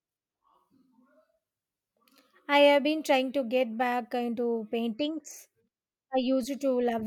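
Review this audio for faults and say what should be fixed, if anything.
No faults found; nothing to fix.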